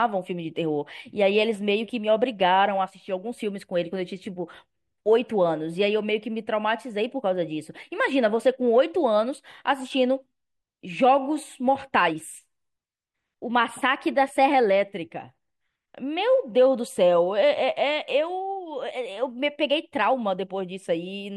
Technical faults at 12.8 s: none

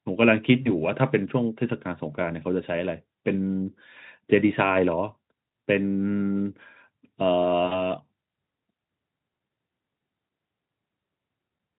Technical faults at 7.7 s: VoIP packet loss concealed by the speech codec

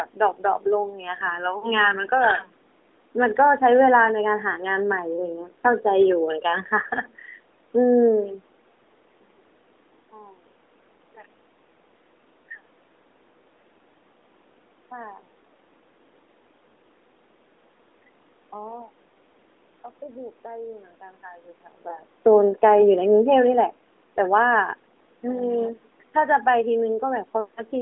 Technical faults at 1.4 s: none

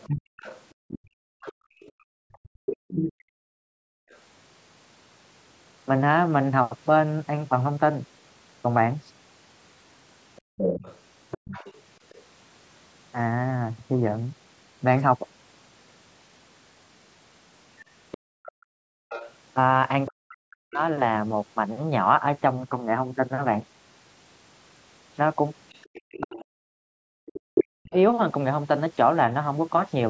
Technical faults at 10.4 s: other side's voice leaking through; background gated by the echo canceller

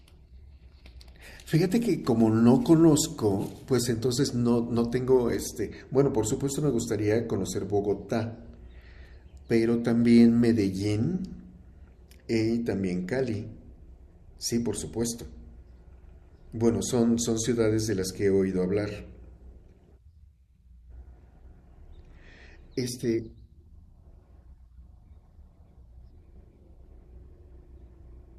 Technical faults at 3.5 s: none

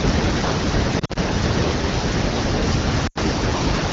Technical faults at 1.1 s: lost AMR speech frames

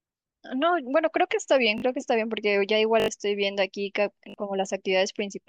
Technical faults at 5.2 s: none

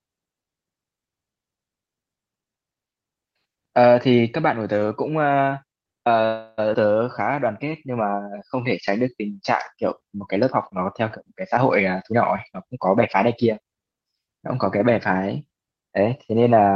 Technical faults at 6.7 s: skip ahead

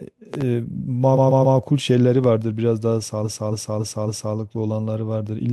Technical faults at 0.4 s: loud pop

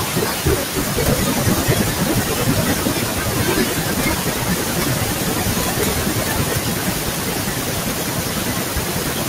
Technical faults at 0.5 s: noise suppressor artifacts; speech cut by the noise suppressor

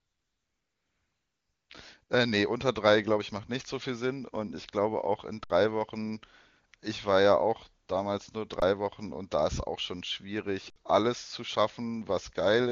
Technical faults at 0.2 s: AMR comfort noise

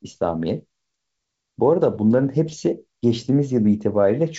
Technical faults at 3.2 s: none

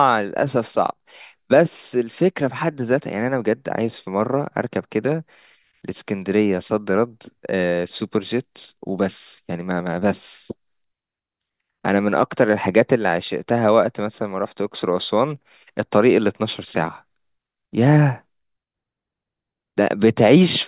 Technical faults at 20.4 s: none

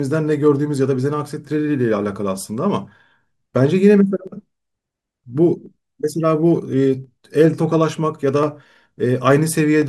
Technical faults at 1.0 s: clock drift buffer slips

